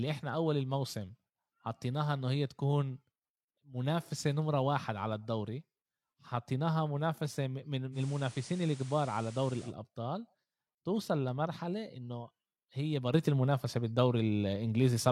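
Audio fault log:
7.92–9.73 s, digital radio blending to analogue: The receiver lost its digital stream and cross-faded to the FM broadcast of the same station, then returned. Each blend takes about 108 ms. A steady hiss rises, roughly 20 dB below the signal. The loudness does not change across the blend. This is the sound of weak-signal analogue reception briefly replacing the digital feed.
13.14 s to the end, sudden gain jump: At 13.14 s the speech and its background noise step up together by about 7 dB, with no fade between the two levels. The higher level holds through to the end of the clip. Because the noise floor rises by the same amount as the speech, the change happened in the signal's gain, not in the speaker's delivery. The likely cause is a digital gain setting applied instantly, without a ramp.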